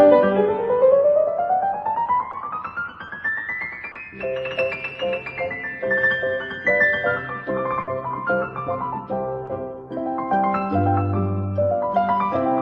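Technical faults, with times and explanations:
2.31–2.35 s, 3.07–3.11 s, 3.91–3.97 s and 9.45–9.49 s: short concealed packet loss. About 20 ms went missing each time (40 ms at 3.91 s), and the receiver bridged the hole by extending the preceding sound, leaving a brief smear or wobble rather than a fade.
7.81–7.89 s: burst of packet loss. About 60 ms in a row never arrived, longer than the isolated drops. The stand-in is held and turned down as it goes, a sustained buzz or fading hiss, before the audio resumes further on with that stretch missing.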